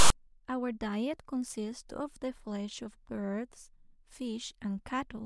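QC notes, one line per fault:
0.00–0.10 s, file tags played as audio: the text tag block gets read as samples, so the speech opens with a hard-edged, lopsided rasp.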